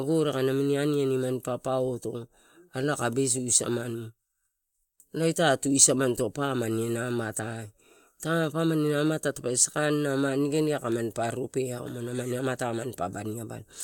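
A speech recording, and nothing is technically wrong with it.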